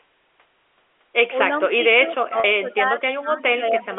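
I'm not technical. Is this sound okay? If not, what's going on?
No. The voice drops in level at 1.46 to 1.58 s (a slight dip), then much more deeply from 1.76 to 2.98 s and from 3.14 to 3.91 s. This is likely speech suppressed in double talk: the echo canceller turned the talker down while both ends spoke.

A faint echo leak appears at 2.08 to 2.12 s and 2.70 to 2.87 s. It is a quiet copy of the voice arriving about a quarter of a second late, likely loudspeaker sound the far end's microphone picked up and sent back.

At 2.40 s, 40 ms of audio went missing, which fits two lost packets. This packet loss with pitch repetition was patched by repeating the last bit of voice, so it sounds like a brief, slightly buzzy held tone. The narrow telephone-style sound comes from ordinary G.711 phone coding.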